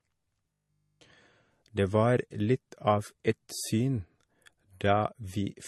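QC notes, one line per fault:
Throughout: transcoding between lossy codecs. The speech has two kinds of compression artefacts layered together. This likely comes from a low-bitrate MP3 re-encoded to Vorbis, where the second encoder wastes bits on the first one's damage and keeps its cut-off.
0.53 to 1.03 s: robotic sound from repeated short buffers. For this half second the speech becomes a rigid metallic buzz at 50 Hz that only loosely tracks the words. The likely cause is one 20 ms block looping while fresh audio failed to arrive, replacing essentially all of it.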